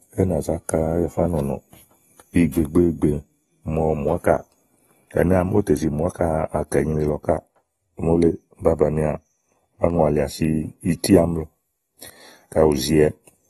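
From start to finish the speech has a clear ceiling at about 12.4 kHz, with nothing above it, and a dull, smeared quality plus a fizzy, warbling edge on sibilants and held vowels. This is likely AAC compression, consistent with AAC-LC at a low rate near 32 kbps, where quantising each frame's spectrum throws away detail. A spectrogram would show the hard top edge, patchy holes and blocky, noise-filled bands in the upper range.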